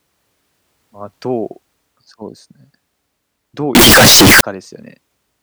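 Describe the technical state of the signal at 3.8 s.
At 3.8 s the speech is hit by a float-read-as-integer fault, running from 3.75 to 4.41 s. The likely cause is 32-bit floating-point samples being interpreted as 32-bit integers, so each sample's sign and exponent bits, not its actual level, dictate the output value. The result is a near-square waveform sitting at an almost fixed, high level: abruptly very loud and harsh, with background noise pushed up to the same level as the speech.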